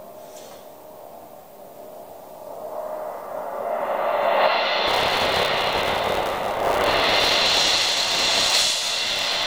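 From 4.87 s to the end, a robotic 100 Hz rattle appears: buffer tearing, where most of each buffer replays audio about 30 ms stale.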